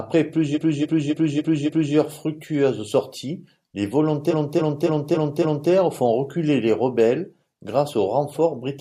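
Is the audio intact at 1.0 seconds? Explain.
No. From 0.54 to 1.93 s the same 0.28 s block of speech plays five extra times, a repeated frames stutter that stretches the clip by about 1.39 s. A short run of compressed frames was decoded again and again, so the audio repeats itself instead of dropping out into silence.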